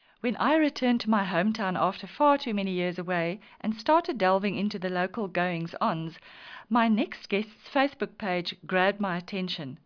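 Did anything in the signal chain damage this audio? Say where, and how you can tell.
No, I can't point to any stage of the chain that has left a mark on this speech recording.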